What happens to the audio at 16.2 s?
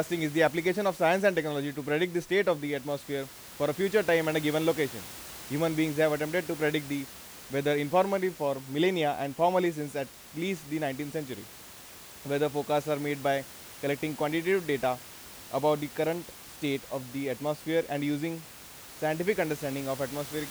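Nothing goes wrong at 16.2 s: the speech carries on intact there, with the room noise sitting about 18 dB beneath it.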